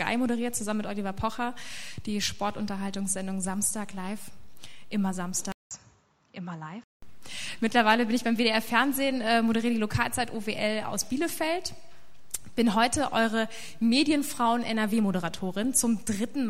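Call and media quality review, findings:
5.52 to 7.02 s: sound goes dull and boxy, a few dB quieter, nothing above 7.6 kHz, faint new noise floor; about 190 ms silence at the switch. Likely input switched to a poorer device with a narrower band and its own noise.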